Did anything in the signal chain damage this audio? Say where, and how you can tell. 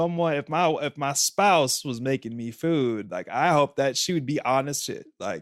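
Yes. At 4.79 to 4.83 s, just after "that she would be", the speech jumps forward abruptly with a brief blip. This is likely a stream segment skipped at the network or playback stage: one segment failed to load and the player continued with the next.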